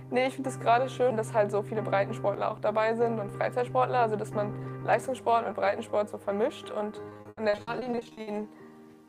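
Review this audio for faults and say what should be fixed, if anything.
Repeated packet loss (robotic sound) runs from 7.09 to 8.29 s. Over that 1.2-second stretch the stream keeps dropping or delaying packets in short bursts, the longest hole about 80 ms. Each hole is bridged by stretching out the last received sound, so roughly 540 ms, about 45% of the span, is concealment rather than real audio. The sound turns choppy, with pieces missing. To prevent it, stabilise the network path and give the jitter buffer enough depth to absorb late packets, with forward error correction to recover lost ones.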